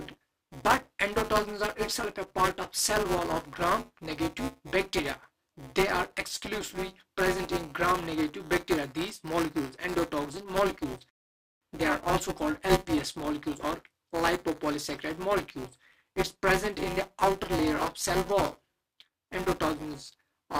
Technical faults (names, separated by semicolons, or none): buffer tearing